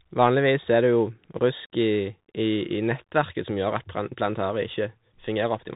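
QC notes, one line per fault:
Throughout, Bluetooth CVSD headset codec: nothing passes above 4 kHz. Coarse one-bit steps leave granular hiss, scratchy s sounds, and distortion on loud high sounds.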